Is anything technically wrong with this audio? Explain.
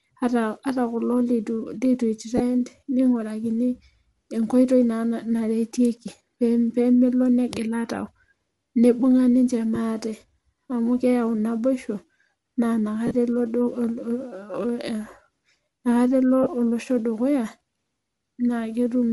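Yes. Throughout the speech there is a plainly audible breathy, grainy edge on the upper frequencies, as though the top of the spectrum were replaced by hiss. That is the sound of Bluetooth LC3 compression, likely at a modest bitrate, which fits something near 48 kbps with short 7.5 ms frames. The codec discards fine high-frequency detail and fills the gaps with shaped noise. Unlike plain low-pass filtering, the top end is still present but noisy rather than missing.

There are also lost LE Audio frames at 2.37–2.41 s, at 9.75 s, across 13.07–13.15 s, and at 16.43–16.47 s just before "olosho dukuya". When a frame fails to arrive, the decoder repeats the previous spectrum with scrambled phase, so each gap turns into a brief noisy smear instead of a click or hard silence. The 13.1 s event is the longest, scattered over about 75 ms with a run of roughly 40 ms, so there the smear fades toward quiet.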